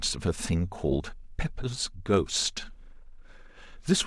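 No technical faults can be heard in this recording.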